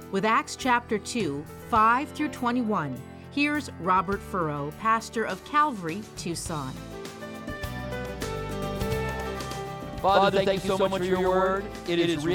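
From 8.62 s right through to the end, you get a doubled audio track: a second full-band copy of the sound sits about a tenth of a second behind the first, at roughly the same level. It comes in abruptly, with no decay or room colour, so it reads as a hard slapback rather than an echo. The likely cause is the audio being captured twice, with one path running slower, or an edit leaving two copies out of step.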